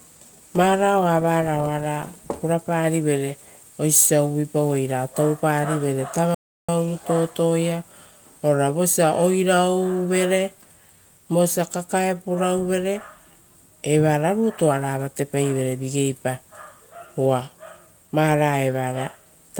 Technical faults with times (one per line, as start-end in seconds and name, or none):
0.00-19.60 clock drift between sender and receiver
0.36-19.60 repeated timing corrections
6.34-6.69 playback stall
12.02-15.73 scattered short gaps